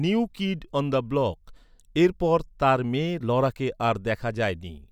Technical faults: none

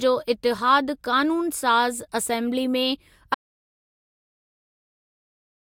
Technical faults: audio dropout to silence

